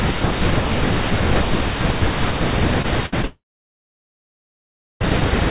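Short concealed packet loss at 2.82 s and again at 3.22 s: about 20 ms of speech went missing each time, and the receiver bridged the gap by extending the previous sound, leaving a brief smear.

A burst of packet loss from 3.06 to 3.14 s removes about 60 ms. The concealment holds the last sound as a fading buzz or hiss before the speech resumes further along.

From 3.25 to 5.02 s, a long network dropout is the likely cause of a short concealed tail fading into about 1.6 s of near-silence. The speech returns with that stretch missing.

Across the whole clip, nothing above 4 kHz survives, which fits a narrowband G.711 call path.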